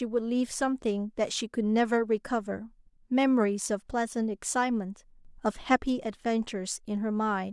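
Speech recording with a sudden gain jump at 5.25 s: the level steps up by about 6 dB with no ramp, voice and background noise rising together, then drops back at 5.76 s. That's likely a gain setting applied instantly rather than faded in.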